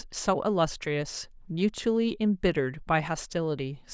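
No technical faults can be heard anywhere in the recording, and the signal holds steady throughout.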